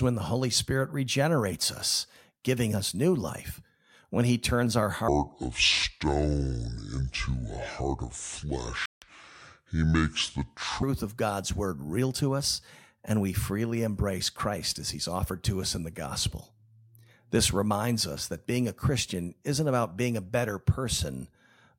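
Just after "he turns our", from 5.08 to 10.83 s, a section at the wrong speed plays at 0.617 times normal, so the speech drops roughly seven semitones and drags, deep and slow. A playback or editing clock mismatch is the likely cause.

Inside that slowed stretch, from 8.86 to 9.02 s, a Bluetooth dropout cuts the sound to silence for about 162 ms, and the audio resumes further along. The gap fits a run of several lost packets that likely did not reach the headphones in time.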